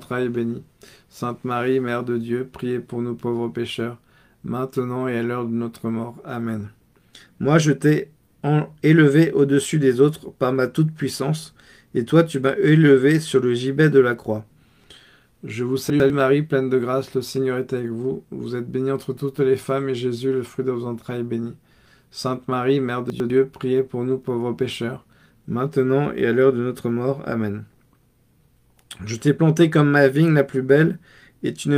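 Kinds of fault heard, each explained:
Chunks out of order: a 100 ms block of audio reached the output one slot late, so it played after the block that should have followed it. Nothing goes missing, but the order is swapped and three hard joins result. This happens twice, over 15.9 to 16.1 s and 23.1 to 23.3 s, each time as a brief jumbled moment where the sound briefly steps backwards.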